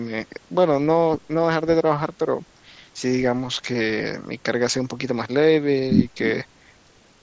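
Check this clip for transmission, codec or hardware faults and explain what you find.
Two brief dropouts in the speech have been patched over, both from concealed Bluetooth headset packet loss. At 3.99 s a 7.5 ms gap is nearly inaudible, and at 6.12 s a 15 ms gap comes through as a brief buzzy tone with a small warble where the speech returns. Audio packets from headset to phone went missing, and the receiver filled each hole by repeating the best-matching recent stretch of waveform. The gap lengths fit one and then two lost frames.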